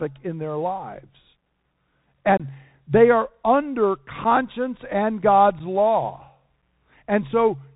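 The whole clip carries the sound of a Bluetooth CVSD headset codec. Nothing above 4 kHz survives. The one-bit coder's adaptive step lags loud high sounds, so sibilants turn scratchy and a granular hiss sits under the speech. The damage is plainly audible and fits a 64 kbps link.

Unconcealed Bluetooth headset packet loss cuts hard holes. At 2.37 to 2.41 s, just before "they are under", about 22.5 ms drops out, a few packets' worth. Single-packet gaps of 7.5 ms follow at 4.24 s, right after "they are under", then at 5.59 s and 6.62 s. After each gap the speech returns briefly quieter.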